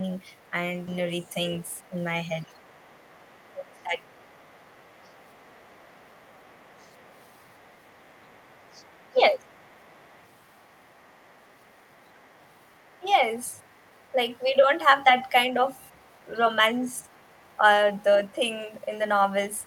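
From 0.00 to 0.52 s the echo canceller likely misread overlapping talk as echo and pulled the talker down. This is speech suppressed in double talk, a brief dip of about 5 dB. It recurs harder from 2.47 to 4.05 s (about 25 dB), from 9.09 to 9.47 s (about 20 dB) and from 13.01 to 13.05 s (about 10 dB), where the voice sinks or drops out in pieces.

Overlapping this, the other side's voice is leaking through from 0.39 to 14.13 s, likely because the canceller left some loudspeaker sound in the microphone signal. It is a faint second voice, about 35 dB below the talker. It returns from 15.89 to 18.33 s and in a short scrap at 19.60 to 19.66 s, at about 40 dB down.

At 0.87 s a skip ahead occurs. Roughly a second of audio was discarded while later packets were already queued, so playback jumps forward with no gap and the two sides butt together.

From 0.99 to 2.28 s a jitter buffer speed-up trims excess buffered delay. 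It cuts about 100 ms of pitch-period fragments, so the speech runs at 107% speed with unchanged pitch and sounds slightly hurried.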